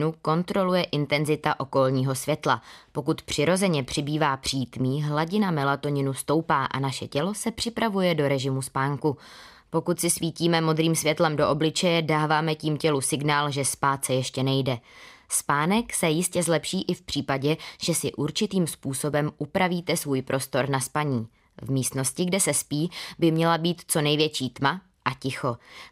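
Speech recording with no technical faults heard.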